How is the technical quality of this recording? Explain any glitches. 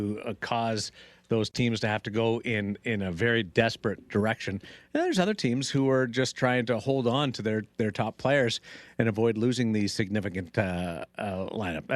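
No technical glitches can be heard in this speech recording. There is nothing in it that needs explaining.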